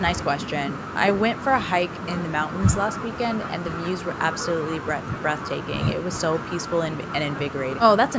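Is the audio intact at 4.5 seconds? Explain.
Yes, the speech at 4.5 seconds is intact, with the call microphone processing trimming only the lowest bass and passing nothing above 8 kHz, as it normally does.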